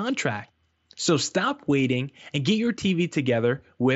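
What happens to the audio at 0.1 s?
Nothing goes wrong at 0.1 s; the speech carries on intact through the Bluetooth mSBC headset path.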